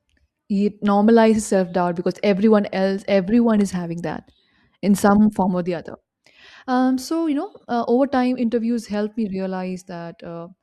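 No technical faults can be heard anywhere in the recording.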